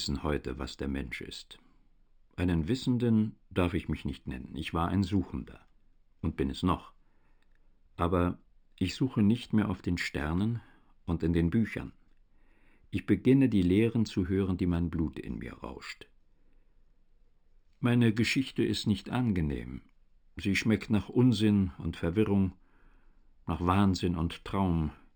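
Throughout, imaging from linear upsampling: the audio was raised from 12 kHz to 48 kHz by straight-line interpolation, leaving a faint mirrored copy between 6 and 12 kHz, about 30 dB down. Unlike a clean band limit, the dulled top is joined by a light metallic shimmer from these mirrored copies, heard on sibilants and high notes.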